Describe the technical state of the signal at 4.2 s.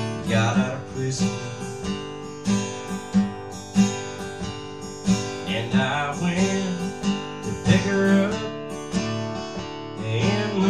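At 4.2 s the signal is intact, with no dropout, clipping, glitch or other fault audible at that moment.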